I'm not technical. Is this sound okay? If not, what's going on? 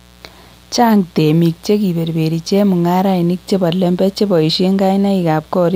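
No. A steady, raspy buzz runs underneath the speech from start to finish, quiet but constant. This is mains buzz: electrical interference from a 60 Hz power supply, often via a light dimmer or poorly shielded cable, leaking into the recording.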